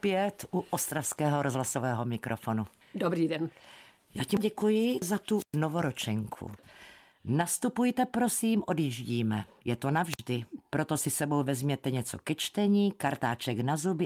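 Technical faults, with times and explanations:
5.35–5.58 s and 10.08–10.22 s, wireless microphone squelch dropout: twice the speech gives way to a short burst of hiss as the transmitter's FM signal weakens at the receiver. The squelch then closes and the output falls to near silence, for about 115 ms in the first event and about 53 ms in the second, before the signal recovers and the speech returns. The hiss comes from the weak carrier, and the silence comes from the receiver muting itself.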